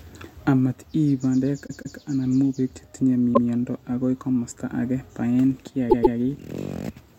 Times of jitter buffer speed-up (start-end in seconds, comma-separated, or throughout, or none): none